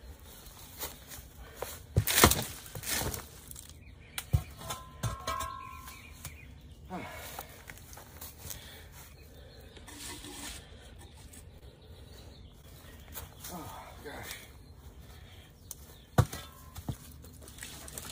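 The audio shows short concealed packet loss at 8.51–8.55 s, 11.59–11.63 s and 12.61–12.65 s. Each hole, which fits one missing 20 ms packet, was filled for 16 to 22 ms by extending the preceding sound, giving a brief smear or wobble rather than the clean silence of a plain dropout.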